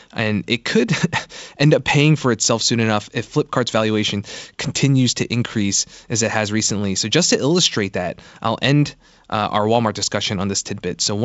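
Nothing stood out on listening to this speech clip, which carries the band-limited sound of G.722 wideband telephone coding with no content above about 7.7 kHz.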